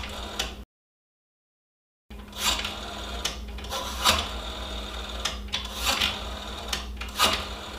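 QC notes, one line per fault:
0.63–2.11 s, playback stall: the player likely starved of data or was blocked, so output falls silent mid-flow for about 1.47 s before resuming.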